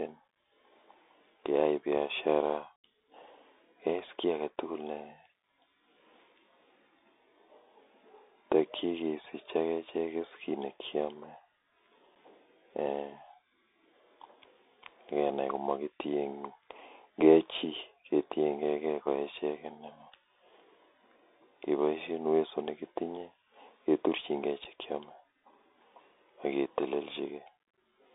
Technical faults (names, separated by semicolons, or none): Bluetooth CVSD headset codec; unconcealed Bluetooth headset packet loss